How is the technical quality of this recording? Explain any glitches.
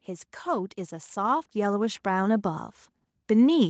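The recording has one clear glitch, a slow level swell, on audio that carries nothing above 8 kHz, as expected from a wideband call path. From 0.43 s to 2.72 s the speech and the background grow louder together, by about 8 dB. This is automatic gain rising: the call's gain control judged the input too quiet and gradually turned it up, lifting everything it hears.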